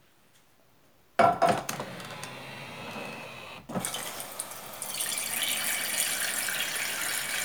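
At 3.76 s there's a sudden gain jump: everything, background noise included, steps up by about 5 dB in one go and stays there to the end. It's likely a gain setting applied instantly, sample to sample, with no ramp.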